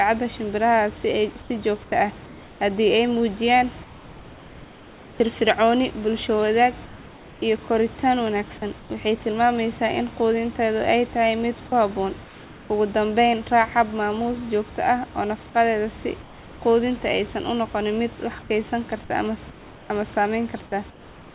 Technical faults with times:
1.42-2.60 comfort noise in place of the background
3.84-5.20 comfort noise in place of the background
8.80-8.90 comfort noise in place of the background
12.24-12.70 comfort noise in place of the background
16.22-16.62 comfort noise in place of the background
18.42-18.50 comfort noise in place of the background
19.50-19.90 comfort noise in place of the background
20.90-21.34 comfort noise in place of the background

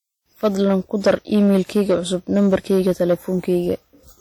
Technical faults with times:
0.00-4.21 hard clipping
0.00-4.21 WMA compression

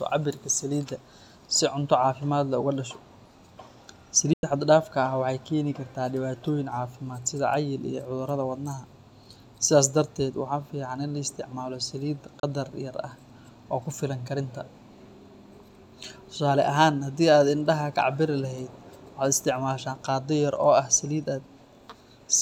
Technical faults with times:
4.33-4.43 digital broadcast dropout
12.40-12.43 digital broadcast dropout

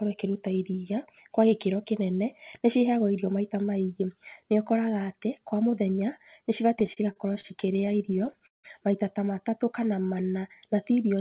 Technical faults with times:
6.80-8.66 repeated stalls (stutter)
9.50-10.41 jitter buffer slow-down

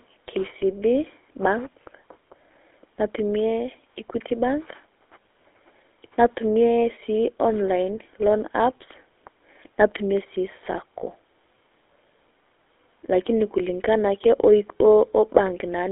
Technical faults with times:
0.00-15.91 GSM full-rate codec

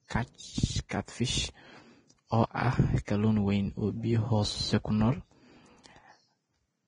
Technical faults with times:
0.00-6.87 Vorbis compression
0.89-0.91 pre-echo
3.05-3.08 pre-echo

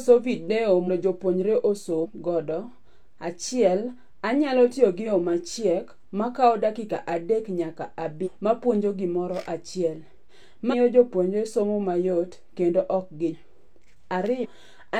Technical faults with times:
0.84-0.89 compressed frames skipped
2.00-2.06 compressed frames skipped
5.02-5.07 compressed frames skipped
8.22-8.29 compressed frames skipped
10.68-10.74 compressed frames skipped
13.29-13.35 compressed frames skipped
14.40-14.46 compressed frames skipped

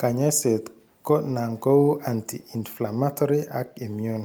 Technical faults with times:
none

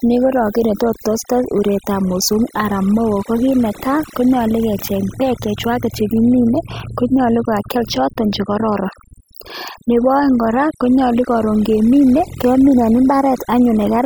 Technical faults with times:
0.00-14.05 overdone noise removal

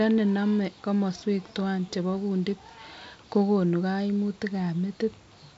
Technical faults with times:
none

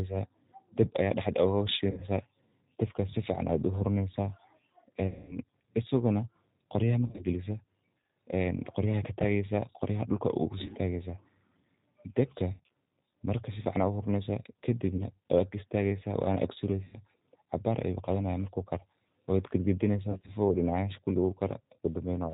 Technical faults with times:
0.00-22.33 G.729 codec
1.91-2.05 VoIP packet loss concealed by the speech codec
5.07-5.38 VoIP packet loss concealed by the speech codec
7.07-7.23 VoIP packet loss concealed by the speech codec
10.66-10.73 VoIP packet loss concealed by the speech codec
12.53-12.68 VoIP packet loss concealed by the speech codec
14.97-15.05 VoIP packet loss concealed by the speech codec
16.85-16.97 VoIP packet loss concealed by the speech codec
20.11-20.32 VoIP packet loss concealed by the speech codec

